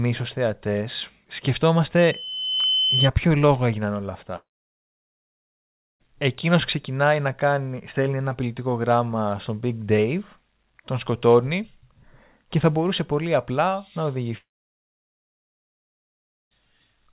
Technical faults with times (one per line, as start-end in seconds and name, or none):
1.98-3.09 loudspeaker feedback squeal
4.36-6.02 long network dropout
14.38-16.53 long network dropout